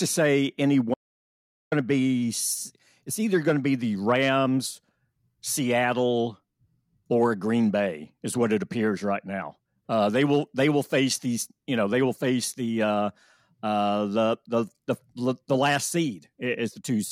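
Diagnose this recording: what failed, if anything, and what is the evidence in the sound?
Audio dropout to silence from 0.94 to 1.72 s: speech cuts mid-flow to silence with no room tone, unlike a gate's decay. The likely cause is a lost input connection.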